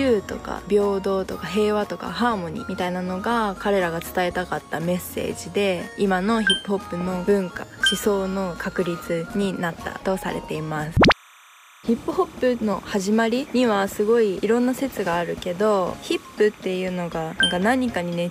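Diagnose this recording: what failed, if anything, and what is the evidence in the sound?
Timecode bleed from 11.00 s to the end at 18.31 s: a chirping warble, roughly 25 dB below the sound, flipping between pitches near 1 kHz and 2 kHz. It is 30 frames-per-second linear timecode crosstalking through analogue wiring from a neighbouring track or cable.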